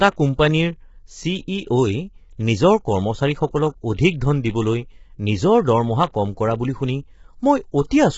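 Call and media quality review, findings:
Low-delay AAC compression, throughout. Rough, grainy speech; noise filling gaps between harmonics; band empty above 7.7 kHz. Likely AAC-ELD at a heavy setting, consistent with about 16 kbps. Short low-delay frames resolve pitch harmonics poorly; the low bitrate starves bits, smearing detail.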